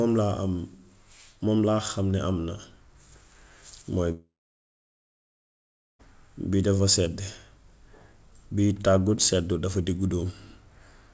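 From 4.12 s to 6.06 s the likely cause is a long network dropout: packets stopped reaching the receiver for close to 1.9 s, and that stretch of speech was never played. The receiver briefly stretched the last sound into a fading buzz or hiss, then gave way to about 1.7 s of silence. The speech resumes at "bii dafa sedd" with the lost part simply gone, still carrying the G.722 call path's band limit at 8 kHz.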